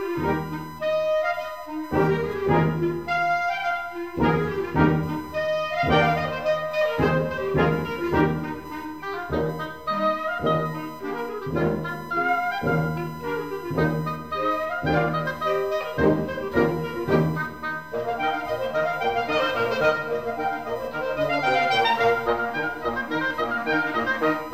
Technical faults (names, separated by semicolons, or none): USB whine